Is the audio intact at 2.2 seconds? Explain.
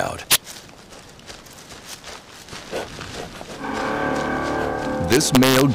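Yes, the audio is intact at 2.2 seconds, with no dropout, click, distortion or other fault at that point.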